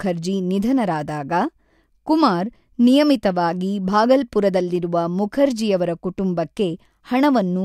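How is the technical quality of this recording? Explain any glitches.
No technical faults can be heard anywhere in the recording, so there are no glitches to explain.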